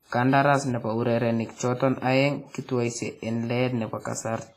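Throughout the speech, the sound rings and washes, with hiss breathing along with it. Nothing is present above 15.2 kHz. This likely reflects heavy WMA compression at about 24 kbps.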